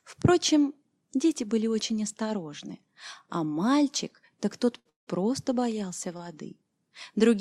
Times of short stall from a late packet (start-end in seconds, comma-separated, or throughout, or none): 4.79-4.87, 6.17-6.21